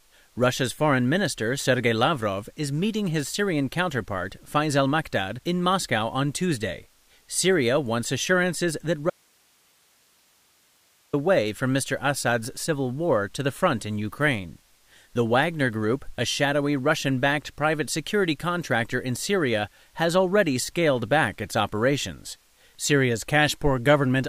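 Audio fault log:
9.10–11.13 s, audio dropout to a faint residue: after "wants assurances that", speech cuts abruptly to hiss about 40 dB down, returning at "away from"; likely a signal break ahead of a still-live path.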